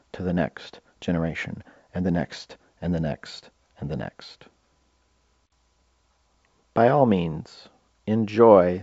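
The speech carries no audible technical fault, and its bandwidth stops at about 7.7 kHz, which fits G.722 wideband telephone coding at its full 64 kbit/s rate.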